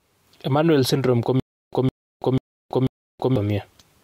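Just after "syndrome ko", from 1.40 to 3.36 s, the speech falls into a stutter with silent gaps. A 161 ms fragment repeats four times, every 490 ms, with about 329 ms of dead silence between. A stalled stream replaying its last buffer is the likely cause. The missing speech is lost.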